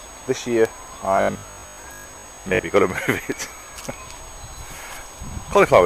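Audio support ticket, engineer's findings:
Robotic sound from repeated short buffers, 1.17–2.65 s. Rigid metallic buzz locked at 50 Hz. Likely cause: starved input stream, with the renderer looping the last 20 ms segment, skipping roughly half the real audio. Unlike codec warble, the pitch stays fixed rather than smearing.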